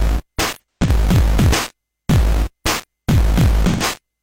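Throughout the clip there is a block size mismatch (truncated). One stage writes longer blocks than the next stage reads, which fits a 1024-sample read, and the tail of every block is discarded. Those regular cuts leave a buzz at 43.1 Hz running under the whole recording, and because material is dropped each cycle, the audio plays 1.12 times faster than it should while its overall timbre is kept.

From 0.54 to 0.90 s there is AAC frame loss with concealment. Frames went missing and the decoder patched the gaps from the last good spectrum, using scrambled signs or interpolated energy. About 171 ms of audio is lost, scattered across roughly 341 ms, with the longest run around a tenth of a second. The affected stretch sounds smeared, noisy or phasey. The same fault returns from 3.69 to 3.83 s, where 128 ms is lost and covered over in the same way.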